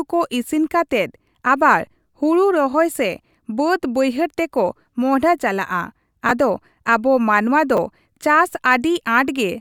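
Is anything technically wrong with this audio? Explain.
Yes. In this speech, two brief jumbled spots occur: at 6.29 to 6.31 s, between "ᱵᱟᱹᱭᱦᱟᱹᱲ ᱛᱮᱠᱚ ᱢᱚᱦᱰᱦᱟ ᱪᱟᱞᱟᱜᱼᱟ" and "ᱟᱫᱚ ᱟᱵᱚ ᱢᱟᱱᱣᱟ", and at 7.75 to 7.78 s, after "ᱪᱟᱞᱟᱜᱼᱟ ᱟᱫᱚ ᱟᱵᱚ ᱢᱟᱱᱣᱟ". These are chunks out of order. A 10 ms block played one chunk late, then two chunks late, so nothing is missing, but the misplaced pieces leave hard joins.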